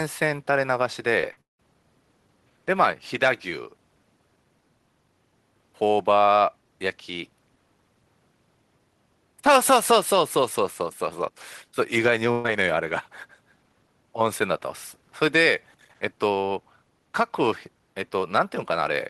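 At 1.21 to 1.24 s there is a short concealed packet loss. About 20 ms of audio never reached the decoder in time, and the receiver filled the gap by continuing the preceding sound. The result is a brief smear or wobble rather than an audible hole, which sets it apart from the longer gaps that follow.

Two bursts of packet loss occur, one next at 1.32 to 1.38 s and one later at 12.32 to 12.45 s. They remove about 50 ms and 120 ms of audio. In each, the continued sound is held as a buzz or hiss that weakens, and the audio resumes further on.

At 1.41 to 1.60 s the sound continues as a fading buzz or hiss, then falls away to silence before resuming. About 180 ms is missing. That decay into silence marks it as a long network dropout, likely a stretch where no packets arrived at all, rather than a short burst.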